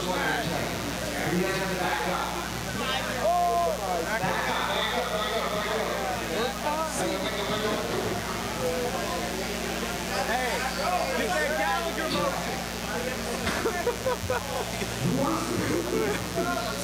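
From start to finish there's a mains buzz riding along, only about 10 dB below the sound itself. Something like a dimmer or an unshielded run is letting sharp spikes in at twice the 60 Hz mains rate, so harmonics climb into the kilohertz range and give that steady, raspy edge.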